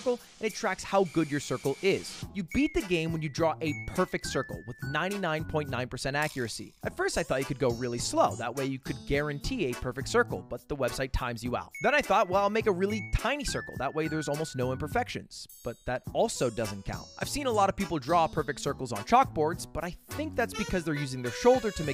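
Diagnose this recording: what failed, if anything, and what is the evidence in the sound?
Nothing failed; no stage shows an audible fault.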